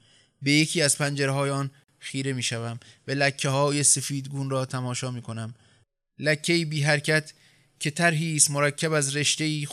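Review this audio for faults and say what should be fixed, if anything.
There's a gap at a join of encoded pieces from 1.84 to 1.88 s: the speech drops out for 47 ms with smeared edges, then resumes. Encoder start delay and last-frame padding were left in at the splice. Trim both before joining, or encode in one pass.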